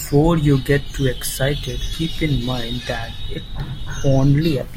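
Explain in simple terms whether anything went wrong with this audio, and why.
Nothing went wrong; no faults are audible anywhere.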